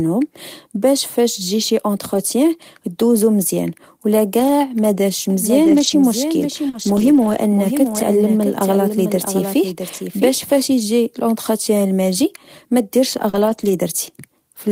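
A speech recording with three kinds of transmission fault. Lost packet rebuilt from error correction occurs seven times: 2.13–2.19 s just after "باش فاش تجي شي", then 4.39–4.49 s, 5.63–5.93 s, 6.73–7.39 s, 7.87–8.01 s, 9.93–9.95 s, and 13.33–13.71 s after "إجي l’entretien الماجي مديرش". Each stretch runs without a gap because the decoder played a low-bitrate copy carried in the next packet. That copy is the real sound, only rougher and noisier, which separates it from concealment. The longest stretch, around 6.7–7.4 s, covers 17 separately lost packets. Short concealed packet loss appears at 6.69–6.75 s and 13.29–13.35 s, each a hole of about 40 ms that the receiver filled by extending the preceding sound. It is heard as a brief smear or wobble in which a consonant can drop out, not as degraded but present audio. In both places it leads straight into an error-corrected stretch. A doubled audio track runs from 5.30 to 10.62 s, with a second full-band copy trailing by around 0.7 s at roughly 5 dB lower. 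It is likely caused by a second, slower capture path. Unlike a room echo it has no decay or reverberant colour, and it cuts in and out abruptly at its edges.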